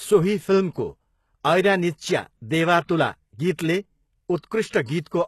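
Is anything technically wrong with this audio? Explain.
Yes. Throughout the speech, the treble sounds bright but synthetic, with gritty, lispy s sounds and a metallic edge. This is likely HE-AAC compression at a very low rate, around 16 kbps: the upper band is rebuilt from copied lower bands, so its harmonics don't align.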